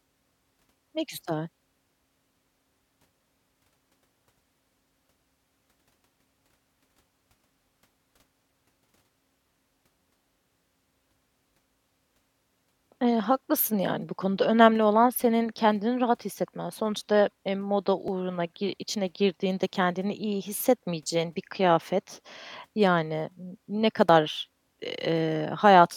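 Timestamps on adjacent stream segments overlap, so the player discards the overlapping stretch even though that speech was never duplicated. An overlap between stream segments at 18.08 s removes about 17 milliseconds, and another at 24.09 s removes even less. At each point the waveform jumps straight to later material, giving a brief click or tiny skip in the speech. The two events sit about 6 s apart, matching a 6-second segment length.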